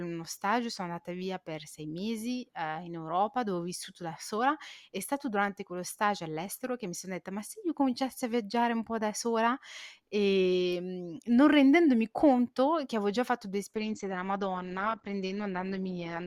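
Adaptive stream at a lower bitrate, from 13.75 s to the end of the clip: right after "avevo già fatto due", the speech suddenly loses its treble, with nothing left above 8.9 kHz, and takes on a duller texture with more codec artefacts, though there is no gap in the audio. The player switched to a lower-quality version of the stream mid-playback. The change in sound points to a drop from around 64 kbit/s to around 16 kbit/s Opus.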